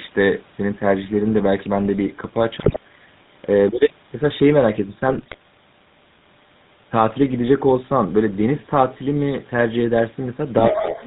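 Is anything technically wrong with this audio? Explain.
Yes, there are several problems. Throughout the speech there is a buzzy, gravelly roughness with nothing above 4 kHz, the signature of the GSM full-rate codec, which rebuilds the voice from a vocal-tract filter driven by sparse, regularly spaced pulses at about 13 kbps.

From 2.6 to 2.78 s and from 5.08 to 5.36 s the voice breaks into squawks, pops and gargling. These are GSM bit errors: corrupted filter, pitch or gain values from a poor radio link distort the spectrum or level of several consecutive frames.

From 10.68 to 11.06 s a second voice comes through, roughly 5 dB below the talker. This is likely the other side's voice leaking through, loudspeaker playback that the echo canceller failed to remove.

Over the same stretch, from 10.7 to 11.0 s, the talker's level dips by roughly 10 dB for about 300 ms. This is likely speech suppressed in double talk, with the canceller attenuating everything while both sides spoke.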